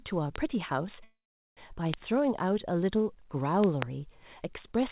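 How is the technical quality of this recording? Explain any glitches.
The recording has loud pops and one call audio freeze. It comes through a call path, with nothing above 4 kHz, which fits a narrowband telephone codec.

Loud pops occur at 0.36 s and 1.94 s, then as a double pop from 3.64 to 3.84 s. Each is a sharp thump about 15 to 20 dB above the speech, likely from a voltage spike such as static or a switch.

A call audio freeze runs from 1.04 to 1.59 s. Delayed packets likely emptied the jitter buffer. The last sound stretches into a fading buzz, then about 0.41 s of silence. Speech resumes without loss, 0.53 s late.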